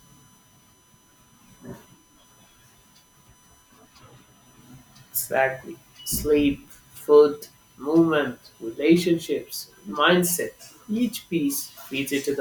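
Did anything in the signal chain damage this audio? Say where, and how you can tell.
Yes. A steady, fixed-pitch whine sits under the speech for the whole clip, built on 1 kHz and strongest at its 6 kHz harmonic, roughly 40 dB down. This is USB whine: current drawn in 1 ms bus frames leaking through shared power or ground in the analogue wiring.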